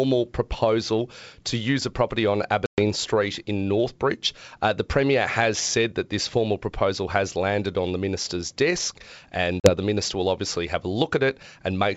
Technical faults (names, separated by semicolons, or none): packet loss on an ADPCM call